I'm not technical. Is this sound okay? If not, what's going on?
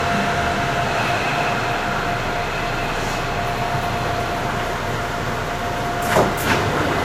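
No. Throughout the clip there is no content above about 16.6 kHz, and the artefacts of heavy compression remain. This is likely low-bitrate audio saved at a high bitrate: the larger second copy cannot restore what the first compression discarded.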